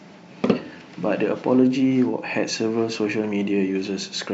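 No technical faults are audible anywhere in the recording.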